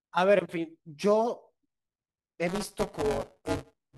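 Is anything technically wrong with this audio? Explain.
Yes. Buffer tearing runs from 2.46 s to the end of the clip. The program filling the playback ring buffer and the hardware reading it have drifted out of step, so they cross partway through every period. About a fifth of each buffer still holds audio from one lap earlier, roughly 15 ms old, with hard joins on both sides. That repeats at 188 Hz, which fits a 256-sample buffer, and it rides on the speech as a steady robotic buzz.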